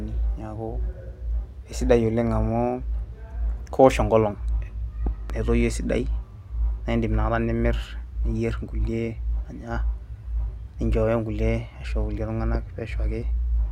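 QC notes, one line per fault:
5.07–5.32 s (two pops) and 12.55–12.57 s (one pop), loud pop: sharp thumps about 10 dB above the speech, likely from a voltage pulse such as a plug, switch or static discharge. Unlike a dropout, the speech carries on underneath.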